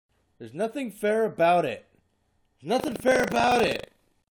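From 2.76 s to the end, buffer tearing: writer and reader cross inside each buffer, splicing in stale audio, heard as a rattling 25 Hz buzz.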